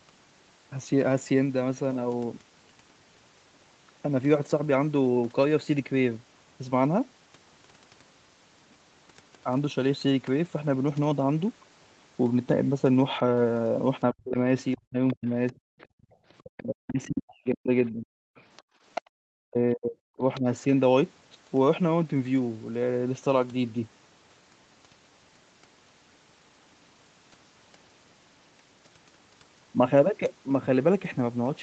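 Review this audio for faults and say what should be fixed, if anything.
Speech suppressed in double talk is the main thing to fix. Between 14.11 and 15.70 s, 16.43 and 18.37 s, and 19.24 and 20.46 s, the talker's level keeps sinking, at worst by around 40 dB, in pieces adding up to roughly a second, a second and a half, and under a second. The likely cause is the echo canceller seeing both sides active, failing to tell near speech from loudspeaker echo, and pulling everything down. A canceller with better double-talk detection, or a headset, would prevent it.

The other side's voice is leaking through at 15.08 to 16.43 s, 18.37 to 19.01 s, and 20.35 to 20.64 s. A second voice sits under the talker, about 20 dB down in the first and last stretches and only about 10 dB down in the middle one. This likely comes from loudspeaker playback reaching the mic and surviving cancellation. Lower speaker volume, or a headset, would stop it.

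The background is gated by the echo canceller twice. The room sound drops about 25 dB from 15.98 to 16.12 s and about 34 dB from 18.65 to 18.82 s, for roughly 0.1 s and 0.15 s respectively, then comes straight back. During loudspeaker activity the canceller clamps the mic hard and then releases it. Gentler suppression with comfort noise would hide these holes. Separately, nothing is heard above 8 kHz, which matches the Opus call path's bandwidth and isn't a fault.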